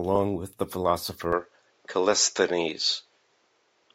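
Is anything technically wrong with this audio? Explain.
Yes. From 1.33 s to the end, the speech abruptly turns duller, with nothing above 7.6 kHz, a faint new noise floor and a level shift of around 5 dB. The likely cause is the input switched to a poorer device. A spectrogram shows the upper band cut off flat there, and the waveform steps in level with no gap.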